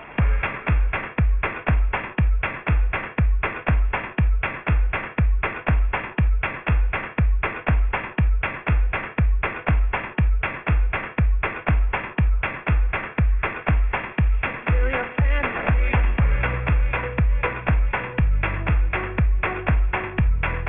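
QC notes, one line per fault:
Throughout: aliasing. The sample rate was lowered without a proper filter first, which fits a drop to 6 kHz. Everything above 3 kHz folds back below it as wrong, unrelated tones, roughly 10 dB under the signal. Highs sound gritty and metallic.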